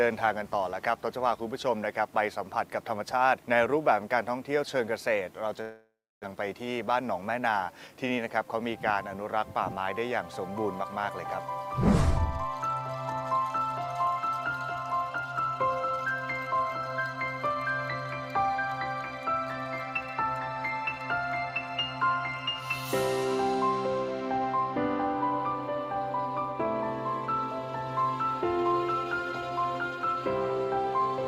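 A long network dropout runs from 5.61 to 6.26 s: the last sound is drawn out into a fading buzz, then about 0.3 s of silence follows, and roughly 0.4 s of audio never returns, most likely because packets stopped arriving for that stretch.

A jitter buffer speed-up follows from 6.35 to 8.45 s. The receiver, holding too much delayed audio after the gap, trims short pitch-period slices repeatedly, so playback runs at 109% speed with unchanged pitch and sounds hurried, shedding around a fifth of a second.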